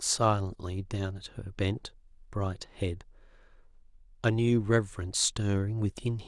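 Listening closely to the speech, nothing stood out as a technical fault at any point.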